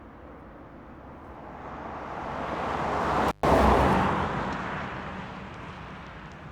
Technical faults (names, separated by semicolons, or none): intermittent contact